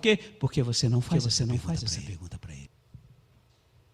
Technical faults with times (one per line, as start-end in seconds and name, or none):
1.04-2.67 doubled audio track